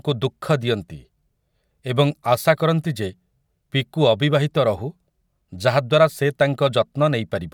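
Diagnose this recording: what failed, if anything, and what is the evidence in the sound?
No fault found in this recording.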